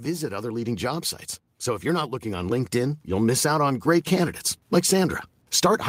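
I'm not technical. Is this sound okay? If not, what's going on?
No. Automatic gain rising: the recorder judged the input too quiet and kept turning itself up, so voice and background steadily swell together from 0.05 s to the end at 5.89 s.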